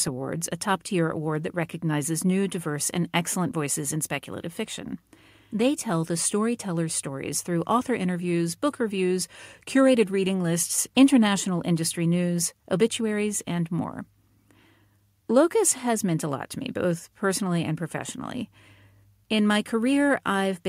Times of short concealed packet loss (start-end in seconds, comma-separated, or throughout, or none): none